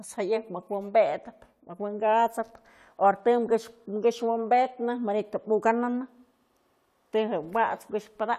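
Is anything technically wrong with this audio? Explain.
No technical faults are present.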